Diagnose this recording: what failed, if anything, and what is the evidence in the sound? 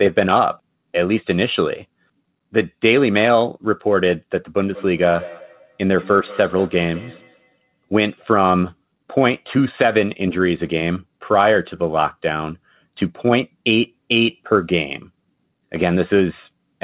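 Call processing failed, with feedback echo between two devices from 4.73 to 7.87 s. The speech returns roughly every 200 ms, each repeat thinner and ringier, peaking about 19 dB below the speech. A nearby device replays the call into a microphone, and each echo canceller removes only its own playback.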